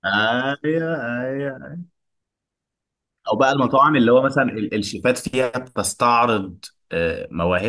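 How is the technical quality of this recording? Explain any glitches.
Nothing in the speech stood out as a technical problem on listening, so there are no glitches to explain.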